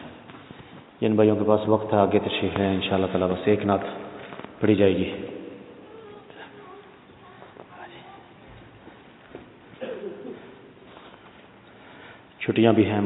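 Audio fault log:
No faults detected.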